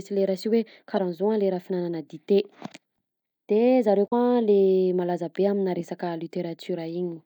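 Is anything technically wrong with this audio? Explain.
Yes. There are two short bursts of damaged data in a compressed stream in this speech. The first runs from 0.96 to 0.99 s. The second runs from 4.04 to 4.13 s, just after "de zareo". In both places some bytes of the compressed data were corrupted. The decoder could not read those frames correctly, lost sync, and had to find the next valid frame header. Each one sounds like a brief chirp, squawk, click or short hole.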